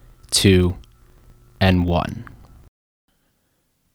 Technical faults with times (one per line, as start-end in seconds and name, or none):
0.00-3.94 filter restarted on every block